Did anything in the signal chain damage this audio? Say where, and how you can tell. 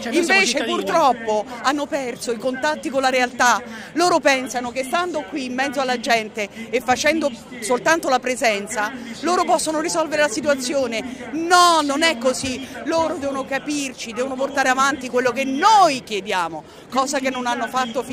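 No, nothing in the signal chain has damaged this audio. No stage, from capture to playback, leaves a mark that can be heard anywhere in the clip.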